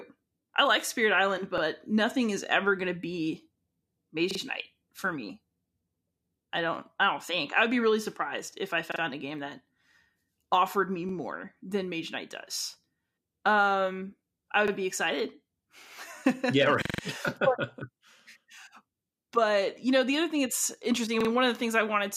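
Repeated buffer stutters occur at 1.58, 4.31, 8.92 (after "really surprised if I", before "a game that"), 11.09, 14.68 (before "be excited"), 16.85 and 21.21 s (after "other thing that's interesting"). Each time fresh audio arrived late, so the device replayed its last block of about 43 ms, which fits a 2048-sample buffer, once to four times, with a hard join at every repeat. The result is a short mechanical stutter, longest at 16.85 s, and no audio appears to be lost.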